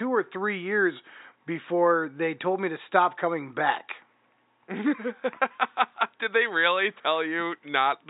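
No technical faults can be heard in this speech clip; the only background is faint room noise, about 52 dB below the speech.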